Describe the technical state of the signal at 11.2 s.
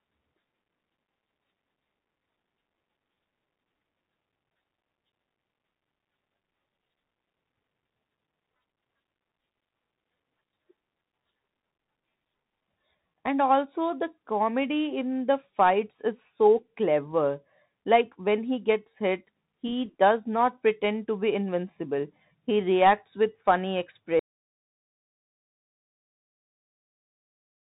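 At 11.2 s the speech carries the Bluetooth CVSD headset codec, present throughout. Adaptive one-bit delta coding leaves nothing above 3.8 kHz, scratchy sibilants, and granular hiss.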